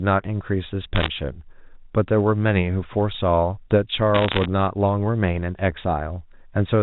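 Bit errors on a digital phone line appear twice in the speech: from 0.96 to 1.08 s and again from 4.14 to 4.46 s. On this 64 kbps G.711 mu-law channel, flipped bits corrupt individual 8-bit samples. Hits on the sign or high-order bits turn into sharp ticks. At an error rate near one percent in the first burst and slightly lower in the second, the ticks cluster into a brief crackle laid over intact, telephone-band speech.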